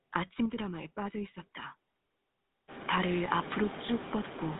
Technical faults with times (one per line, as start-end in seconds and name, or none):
0.00-4.59 noise suppressor artifacts
0.00-4.59 GSM full-rate codec